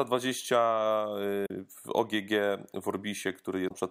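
Damaged data in a compressed stream at 1.43–1.50 s and 3.65–3.72 s: corrupted frames throw the decoder out of sync, producing brief glitches in the speech.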